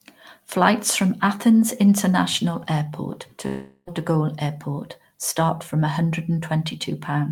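At 3.47 s the speech breaks off and, until 3.89 s, the last fragment is stretched into a fading buzz. A brief silence of about 30 ms follows before the speech returns, with about 400 ms of it simply gone. This points to a long network dropout, likely caused by packets failing to arrive while the receiver improvised. A spectrogram shows smeared, repeating bands thinning into a blank strip, and the waveform shows a decaying envelope collapsing to flat.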